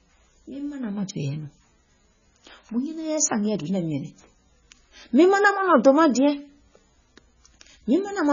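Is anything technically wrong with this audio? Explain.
Yes. Throughout the speech there is heavy damage from what is likely MP3 compression at a very low bitrate, consistent with something near 16 kbps. Starved of bits, the encoder discards everything above 7 kHz and zeroes the weaker frequency lines, which then blink on and off between frames. The result is dull, band-limited speech with a watery, swirling texture, metallic chirps on s sounds, and smeared consonant onsets.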